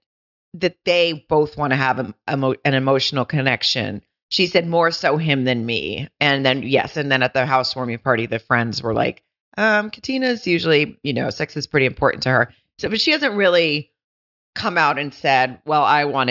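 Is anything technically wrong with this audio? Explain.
No, nothing technically wrong stood out on listening to this speech recording.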